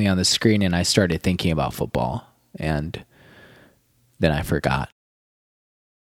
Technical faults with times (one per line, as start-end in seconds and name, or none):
none